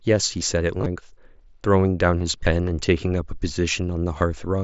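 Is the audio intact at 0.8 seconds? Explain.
No. From about 0.79 to 0.86 s there is concealed Bluetooth headset packet loss: voice packets between headset and phone went missing, about 50 ms of audio in total, scattered across 75 ms, with the longest unbroken gap near 22 ms. The receiver filled each hole by repeating the best-matching piece of the preceding 20 ms or so, so the sound turns briefly buzzy and tonal at full level, then warbles slightly as real audio resumes.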